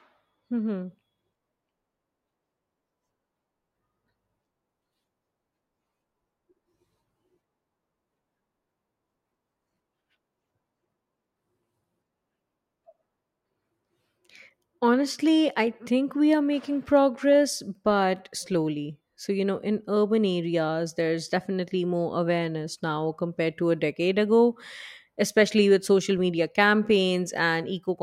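No technical faults can be heard anywhere in this recording of speech, from its first moment to its last.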